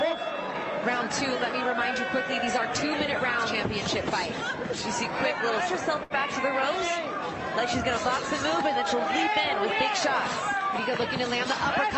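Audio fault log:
6.03 to 6.13 s, short stall from a late packet: a packet turned up late, the jitter buffer ran dry, and the receiver stretched the last bit of sound for about 67 ms until it arrived, then carried on from the same spot. Nothing is lost, but that moment hangs a touch too long with a faint buzzy or dipped quality, and everything after sits 67 ms later. This is all over the Opus call path, whose top end stops around 8 kHz.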